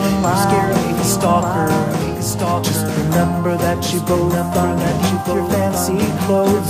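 A second, slower capture path or an edit that holds two copies out of step has most likely put the same music into the mix twice, and this doubled audio track runs throughout. A full-band copy trails the original by about a second, only around 5 dB quieter. It carries no decay or room colour, so every passage returns as a flat, dry repeat layered over later material.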